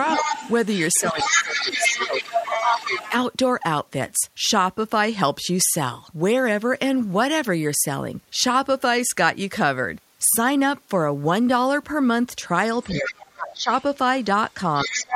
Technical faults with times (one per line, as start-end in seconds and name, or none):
0.08-3.10 other side's voice leaking through
0.18-0.27 speech suppressed in double talk
1.00-3.13 speech suppressed in double talk
12.82-13.12 other side's voice leaking through
12.95-13.70 speech suppressed in double talk
13.51-13.56 other side's voice leaking through
14.81-15.15 other side's voice leaking through
14.85-15.15 speech suppressed in double talk